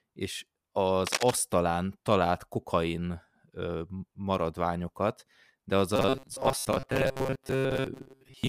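At 1.07 s there's a quick burst of cable scratch noise running to 1.34 s: dense, uneven scratching laid over the speech, sitting only a few decibels under it, so it's hard to miss. The likely cause is a worn cable, connector or control being nudged. Its contact resistance jumps around as it moves, and each jump lands in the signal as a ragged little spray of noise.

From 5.96 s right through to the end, the speech goes robotic, the classic sound of repeated short buffers. It turns into a rigid, metallic buzz locked at 133 Hz that still roughly tracks the speech. A fixed 133 Hz pitch fits a chunk of about 7.5 ms being looped, likely because fresh audio wasn't arriving in time. Most of the real audio in that stretch, something like two-thirds or more, is skipped and replaced by repeats.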